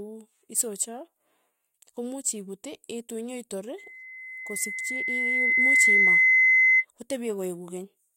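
From 3.78 to 6.85 s, a single 2 kHz tone swells over about two seconds into a loud squeal: loudspeaker feedback, the microphone re-amplifying its own speaker output.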